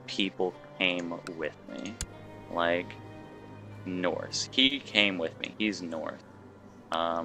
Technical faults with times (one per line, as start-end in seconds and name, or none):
4.65-4.71 short concealed packet loss